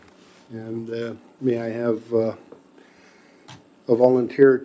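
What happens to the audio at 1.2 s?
Nothing goes wrong at 1.2 s; the audio carries on intact through that moment with no dropout, click or other fault.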